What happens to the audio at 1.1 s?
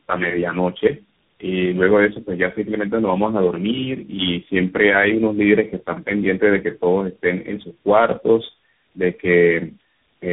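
Tandem speech coding affects the speech at 1.1 s, as it does for the whole clip. The call appears to have passed through three separate speech coders in a row, with decoding and re-encoding at each link, so each coder worked on the previous one's degraded output. The result is rough, muffled, warbly speech with nothing above 3.8 kHz. That fits a chain such as G.729A, AMR-NB and CVSD joined by G.711 links.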